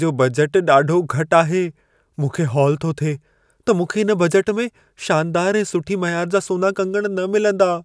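Nothing in this speech recording stands out as a technical fault, so there's nothing to flag anywhere along its timeline.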